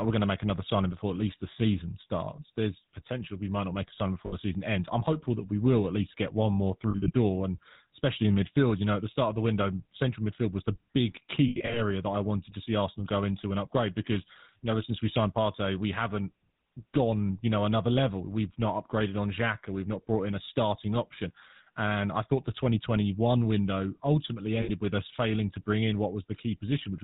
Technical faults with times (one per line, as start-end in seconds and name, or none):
0.00-27.04 GSM full-rate codec
4.26-4.34 lost GSM frames
6.90-7.11 lost GSM frames
11.48-11.80 lost GSM frames
24.62-24.71 lost GSM frames